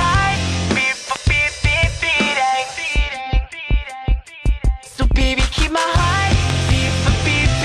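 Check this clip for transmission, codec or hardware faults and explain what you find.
There's one kind of fault here, a loud pop, and it turns up twice. The first is a single pop from 1.16 to 1.18 s. The second, from 6.50 to 6.71 s, is a pair of pops in quick succession. Each stands roughly 15 dB above the surrounding sound, which keeps running underneath. The likely cause is a voltage step or spike from a plug, switch, static discharge or driver glitch. The downstream circuitry shapes that spike into a sharp pop or thump.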